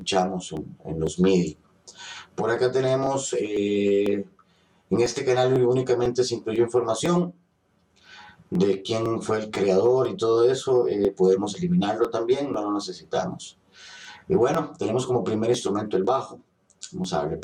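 Channel delay (comb filtering) runs through the whole clip. One channel lags by roughly 10 ms and the two are summed. Fixed notches start near 50 Hz, making the sound hollow and phasey.

From 0.07 s to 17.04 s, periodic USB or driver dropouts occur every 0.5 s. Each skips about a millisecond of audio, leaving a steady series of small ticks.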